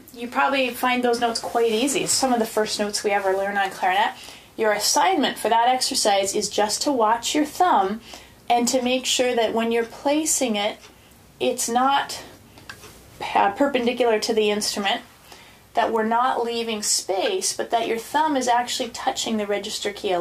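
At 6.77 s and again at 15.96 s there's a sharp little snap sitting on top of the sound, the second a touch louder, around -20 dBFS. That's an electrical switching spike, likely a nearby switch or motor arcing into the audio line.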